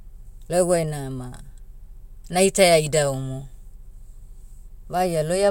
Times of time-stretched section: none

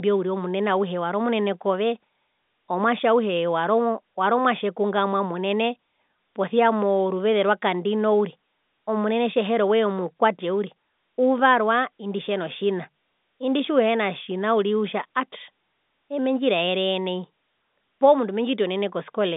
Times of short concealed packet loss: none

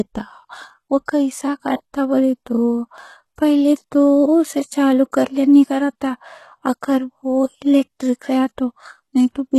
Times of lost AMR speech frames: none

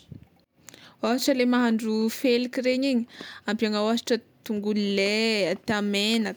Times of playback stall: none

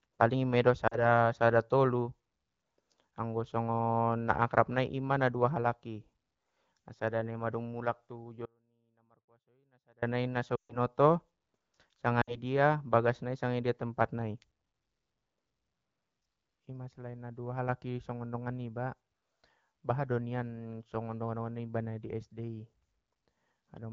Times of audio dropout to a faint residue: 8.46-10.02

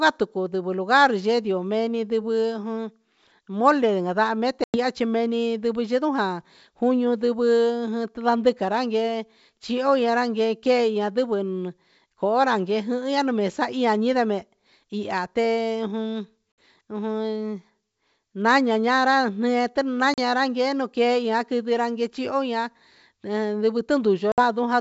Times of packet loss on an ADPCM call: 4.64-4.78, 16.52-16.61, 20.14-20.20, 24.32-24.41

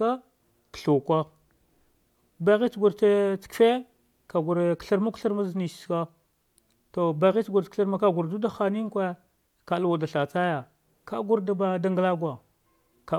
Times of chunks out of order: none

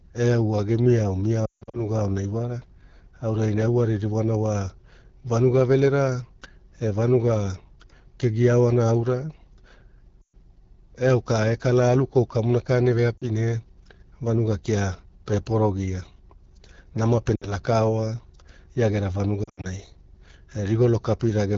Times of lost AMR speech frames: 1.46-1.80, 10.21-10.34, 13.17-13.24, 17.36-17.54, 19.44-19.67

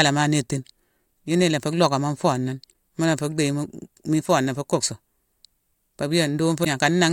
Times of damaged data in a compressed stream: 6.61-6.67

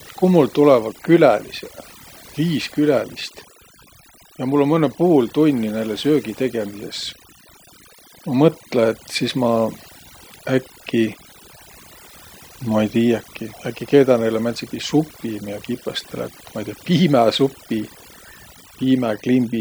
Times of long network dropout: none

